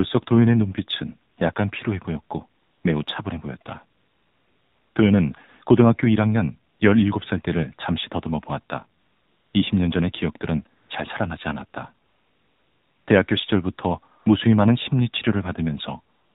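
The whole clip carries AMR narrowband mobile codec damage. Nothing passes above 4 kHz. The speech sounds plainly buzzy and synthetic, which fits a low 7.4 kbps mode.

AMR comfort noise appears in eleven pauses, from 1.32 s to the end at 16.35 s. The phone stopped sending speech frames for 20 ms to about one second each time. Steady synthetic noise switches in place of the real background.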